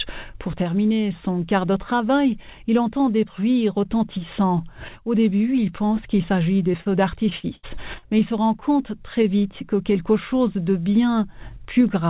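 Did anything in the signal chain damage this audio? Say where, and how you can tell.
Yes. Short concealed packet loss hits the network stage at 6.72 s and again at 6.81 s. About 20 ms, then 40 ms, arrived too late. The decoder bridged each hole by extending the previous sound and blending back. Each one leaves a brief smear or wobble.

Repeated packet loss (robotic sound) follows from 7.29 to 8.04 s. Five gaps drop about 220 ms in total. The longest lasts 79 ms. Roughly a quarter of that stretch is concealment, so the audio turns choppy, inside the call path's 4 kHz band limit.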